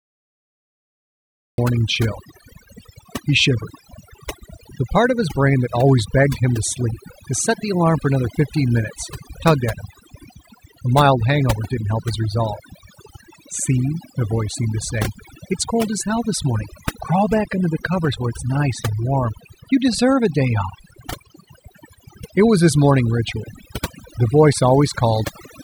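The recording began late, so the first 1.58 s hold only digital silence and the speech then enters at 1.58 s already mid-sound. This cut-off start has no natural attack or fade-in; the sound simply switches on partway through.

Throughout all of the speech, a noise reduction stage set far too aggressively pulls individual frequency bands down or out whenever they sit close to its noise estimate. Quieter parts of the voice are removed along with the noise. This overdone noise removal leaves the background lowered and broken up into twinkling, warbling specks.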